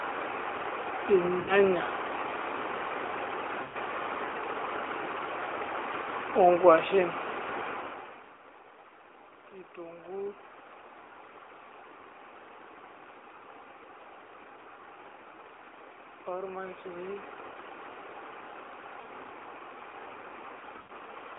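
Speech carried over an AMR narrowband mobile link, with its band limited to roughly 300 Hz to 3.7 kHz, shows two kinds of fault. Lost AMR speech frames occur at 1.40–1.55 s, 3.64–3.76 s, 19.02–19.08 s and 20.78–20.92 s, with gaps of 80, 100, 40 and 120 ms. Those lengths fit runs of two to six 20 ms frames that failed their radio checksum. Across each gap the decoder keeps repeating the last good pitch and spectral shape at falling gain. The 19.02 s gap is the shortest. The longer ones smear and sag toward silence before the voice returns thin and rough for a moment. Automatic gain rising appears at 16.25–17.35 s, where the gain control judged the input too quiet and raised its gain by about 5 dB over roughly a second. The voice and the room noise behind it swell together, which separates this from the talker simply moving closer to the microphone.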